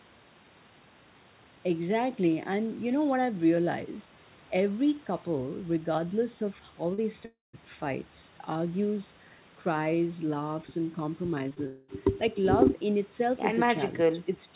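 Short concealed packet loss appears at 6.94 s and twice in quick succession at 11.49 s and 11.54 s in this speech clip, heard through a narrowband call path with nothing above 4 kHz, which fits G.711 coding. Each time, some 20 to 40 ms of audio arrived too late, so the receiver extended the preceding sound and blended back in, leaving a brief smear or wobble. Long network dropouts follow at 7.25 to 7.55 s and 11.66 to 11.90 s, likely from packets failing to arrive for about 0.3 s and 0.2 s. The receiver stretched the last sound into a fading buzz or hiss, falling to silence for roughly the final 170 ms in the first gap, before the sound resumed with that stretch missing.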